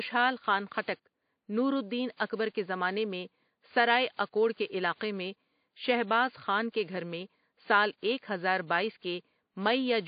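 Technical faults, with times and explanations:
Throughout, WMA compression: heavy codec damage leaves ringing, a washy smear and hiss that rises and falls with the speech. The likely cause is a WMA 1 encoder with long transform blocks, which spreads quantisation noise over tens of milliseconds and zeroes weak spectral lines, pointing to roughly 32 kbps.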